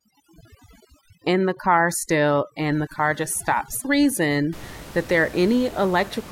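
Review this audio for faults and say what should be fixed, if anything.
Overdone noise removal runs from the start to 4.53 s, ending just before "that there are". A noise reducer set far too aggressively is switching off individual frequency bands whenever they fall near its noise estimate. It cuts the quieter parts of the speech along with the room noise, which sits about 18 dB below the speech. The pauses collapse to near silence flecked with twinkling specks.

Prevent it by lowering the reduction depth so noise bands are turned down moderately rather than removed.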